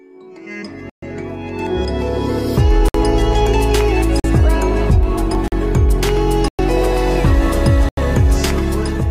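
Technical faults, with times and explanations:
0.90 to 7.97 s, blocks of digital silence: holes at 0.90, 2.88, 4.20, 5.48, 6.48 and 7.89 s, lasting about 40 to 130 ms. The audio drops straight to silence and back with no fade. The 43 ms gaps fit a 2048-sample buffer.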